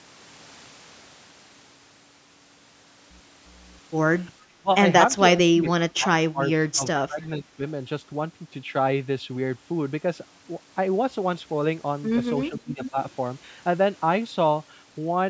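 At 4.56–4.71 s, 5.46–7.62 s and 12.49–12.97 s the speech dips by up to about 25 dB or drops out in fragments. This is likely speech suppressed in double talk, with the echo canceller attenuating the near talker while the far end was also active. Short, faint copies of the speech delayed by 439 ms appear at 5.67–5.71 s, 7.22–7.26 s and 12.83–12.90 s, sitting roughly 15 to 35 dB below the direct signal. This is likely echo leak, where loudspeaker pickup that the canceller failed to fully remove was sent back.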